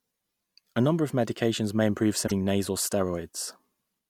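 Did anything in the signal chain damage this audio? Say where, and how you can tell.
Yes. Damaged data in a compressed stream appears from 2.24 to 2.32 s, just after "of medications may improve," where the speech breaks up for about 80 ms. The damage sits at the codec stage, in the encoded bitstream. Corrupted or missing bytes there leave the decoder with frames it cannot read correctly, so it outputs nonsense or drops them, loses frame sync, and scans ahead for the next valid header before normal audio resumes.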